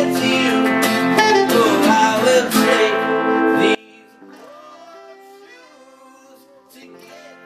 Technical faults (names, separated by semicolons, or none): one channel inverted